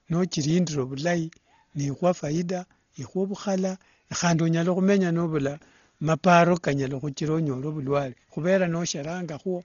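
Throughout the speech, the sound is dull and muffled, with nothing above about 6.9 kHz and a rough, fluttering noise clinging to tones. This is likely Dolby Digital compression at a starved bitrate, consistent with roughly 32 kbps, where missing detail gets filled with dither noise.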